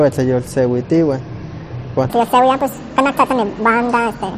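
From 2.09 s to the end at 4.38 s there is a section at the wrong speed. The audio was likely played against the wrong clock, running 1.71 times too fast. Speed and pitch rise together, so the speech turns hurried and squeaky, lifted about ten semitones.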